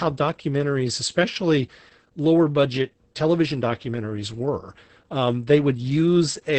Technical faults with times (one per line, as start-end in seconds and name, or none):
0.00-6.59 Opus voice compression